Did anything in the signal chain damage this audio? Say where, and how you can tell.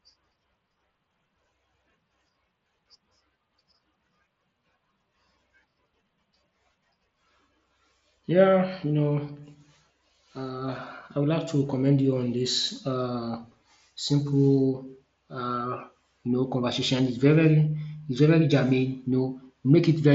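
No, nothing in the chain damaged this audio.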